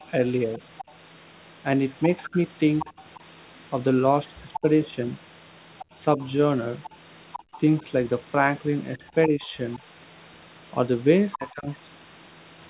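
From 0.79 to 9.79 s a second, quieter voice sits well below the talker. This is the other side's voice leaking through, likely loudspeaker echo the canceller failed to remove. During that stretch the talker's speech dips or thins in short pieces at 2.28 to 3.0 s, where one drop is very deep, and again at 4.61 to 6.2 s and 7.83 to 9.81 s, where the dips are milder. This is speech suppressed in double talk, likely the canceller turning everything down while both sides overlap. The leak returns briefly at 11.32 to 11.53 s, and from 11.36 to 11.69 s the talker ducks again by a clear margin.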